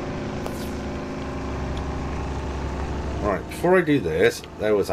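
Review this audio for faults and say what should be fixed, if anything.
There are two loud pops, at 0.47 to 0.49 s and 2.80 to 2.82 s, each about 10 dB over the sound, likely a voltage spike from a plug, switch or static. Secure connectors and mute before switching.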